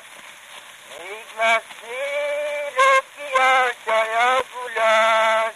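At 0.98 s and again at 4.40 s the audio drops to a block of digital silence, about 8.7 ms and 5.8 ms long, likely as output buffers went unfilled. The second gap fits a 256-sample buffer. Each cuts abruptly, heard as a tick or dip.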